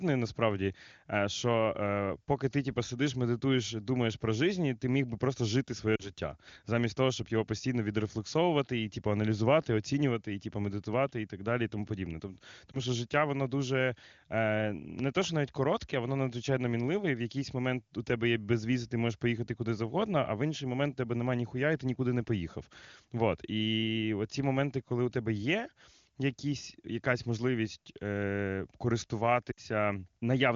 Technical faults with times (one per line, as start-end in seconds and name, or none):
5.95-6.12 lost AMR speech frames
12.72-12.79 lost AMR speech frames
14.99-15.27 loud pop
29.51-29.60 lost AMR speech frames